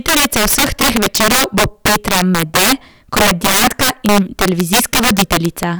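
Integer overflow runs through the whole speech clip. The signal has been pushed about 18 dB too hot, so its loudest peaks exceed the largest value the integer format can hold. Instead of being held at the ceiling, those samples wrap around to the opposite extreme, jumping across the full range in one step. About 7 percent of samples are affected, and each louder syllable breaks into harsh, violent cracks, far sharper and more jarring than ordinary clipping.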